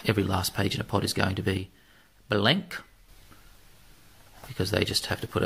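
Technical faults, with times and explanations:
1.57–3.09 s, one channel drops out: the likely cause is one side of a stereo feed going silent while the other keeps running, so the folded-down mono signal loses half its contribution. The level falls abruptly by about 6 dB at 1.57 s, quieter but otherwise unchanged. At 3.09 s the full level snaps back, giving a sudden step up rather than a smooth recovery.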